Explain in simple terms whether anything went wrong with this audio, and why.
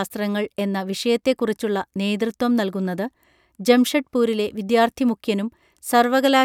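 Nothing went wrong technically with this speech recording: it runs from beginning to end without any break, jump, distortion or drop in the signal.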